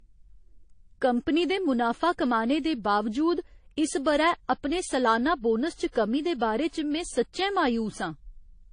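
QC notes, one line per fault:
Throughout: transcoding between lossy codecs, likely repeated MP3 and AAC-LC encoding, so the speech carries layered smearing and swirl, with nothing heard above about 9.8 kHz.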